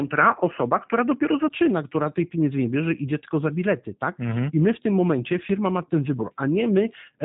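It's a speech clip with G.729 codec damage that's plainly audible the whole way through: nothing above about 3.8 kHz, and the speech has that slightly rough, synthetic edge of a model-based vocoder, which fits an 8 kbit/s codec rebuilding each frame from a filter, a pitch predictor and a few pulses. From the start to 1.5 s the sound is even duller and boxier, cut off around 3 kHz, with a faint extra noise floor well below the speech and no real level jump. A 20 ms gap then leads into the fuller sound at "która tej pieniędzy nie", so it's likely the input switched from a poorer device.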